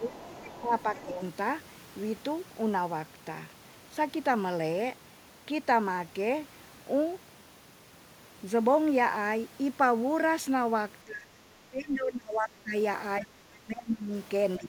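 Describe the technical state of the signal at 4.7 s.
At 4.7 s the speech signal is intact, with no technical fault present at that moment.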